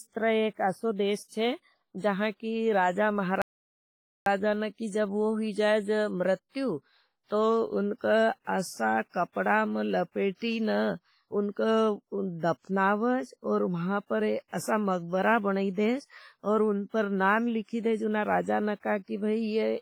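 From the start, the speech carries a washy, ringing texture with hiss that swells and fades with the voice. This is heavy damage consistent with WMA compression, likely at a low bitrate of around 24 kbps. The transform codec smears quantisation noise over long blocks and drops weaker spectral detail, so the damage spreads across tens of milliseconds. A simple low-pass filter would only dull the sound, and a noise floor would stay steady instead of breathing with the signal.

At 3.42 s, right after "छे जहां कि राजा", the sound cuts out mid-flow and stays silent until 4.26 s, a gap of about 0.85 s. This is a playback stall. The player likely ran out of data or was held up before it resumed. The sound breaks off cleanly into silence, with no repeated fragment and no burst of noise. That separates it from a buffer underrun loop or a packet-loss glitch.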